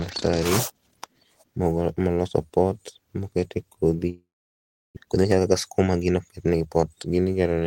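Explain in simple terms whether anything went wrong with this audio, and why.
Right after "moloso pot mokete kodhi", from 4.09 to 4.99 s, the speech breaks off into a brief fading buzz and then near-silence, and about 0.6 s of speech never returns. This is likely a long network dropout: the audio stopped arriving, so the receiver filled the gap.

From 5.06 to 6.97 s the speech sounds rushed, running about 13% faster while the pitch stays the same. That is a jitter buffer speed-up. After the gap, the receiver was holding extra audio and trimmed many tiny slices, roughly a third of a second in total, to catch up.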